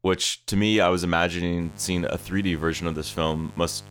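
At 1.58 s a steady, raspy buzz cuts in under the speech and stays to the end, sitting roughly 20 dB below it. This is mains buzz at 50 Hz. Something in the power or signal path, most likely a dimmer, a rectifier or a missing shield, is letting sharp switching spikes into the audio twice per mains cycle. Because the spikes are so abrupt, the hum's harmonics climb well into the kilohertz range, which gives it a gritty edge rather than a smooth low tone.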